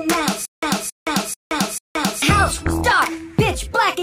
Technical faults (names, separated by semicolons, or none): stutter with silent gaps